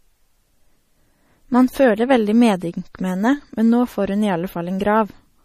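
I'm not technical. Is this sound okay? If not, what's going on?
No. Throughout the speech there is a watery, swirly quality, sibilants turn metallic, and nothing sounds above about 15.2 kHz. This is likely MP3 compression at a low bitrate: the encoder removed the top treble and dropped quieter detail that flickers between frames.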